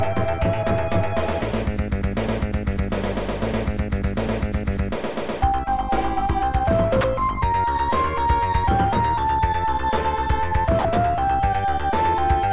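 Sound dropped by the voice detector, at 7.01 to 7.04 s and 10.79 to 10.85 s: the sound briefly gives way to steady noise for 30 and 60 ms, likely because the sender's detector mistook it for background and stopped sending, leaving comfort noise in its place.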